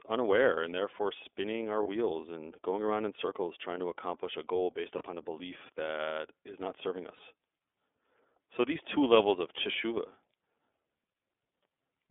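iLBC codec coding runs through the whole speech clip: the band is held to roughly 300 Hz to 3.5 kHz, and each frame's excitation is coded on its own, leaving a plainly audible rough, synthetic edge that fits the 30 ms, 13.33 kbps mode.

Lost iLBC frames occur at 1.83 to 1.87 s, after "and therefore spinning our"; at 4.98 to 5.03 s, after "accomplish a goal based"; and at 7.17 to 7.20 s, after "that is not serving". Each drops about 30 ms, which points to one lost frame. The decoder fills it by repeating the last pitch cycle with added noise, heard as a short, buzzy held vowel, and the sound recovers right away.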